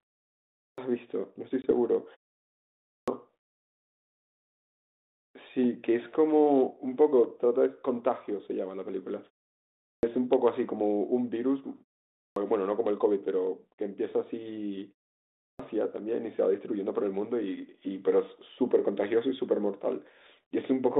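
At 0.58 s the output device, having gone idle during the 0.58 s of silence before it, is still waking when the talker resumes, so about 0.2 s of speech is swallowed and the first syllable bursts in abruptly, missing its opening sounds. This clipped start after a pause recurs throughout.

At 1.62 s a packet loss on the ADPCM call drops a single 20 ms packet. The hole is filled with hard-edged silence. Because the decoder's adaptive predictor and step size have drifted from the sender's, the speech comes back through 1.71 s slightly distorted before it settles. The line itself sounds like 32 kbit/s G.726 confined to roughly 200 Hz to 3.7 kHz.

The same wake-up delay clips speech again at 2.87 s after a 0.79 s pause, at 9.83 s after 0.61 s, at 12.18 s after 0.42 s, and at 15.4 s after 0.54 s. Each time roughly 0.18 to 0.21 s of the onset is lost, so the word begins abruptly out of silence.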